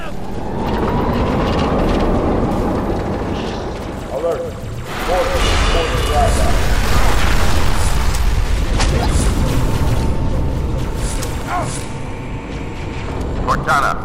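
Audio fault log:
11.42 s, block of digital silence: a tiny run of samples, about 0.15 ms long, drops to silence and returns with no fade. The gap is far too short to hear as a hole, so the two abrupt edges merge into one tick.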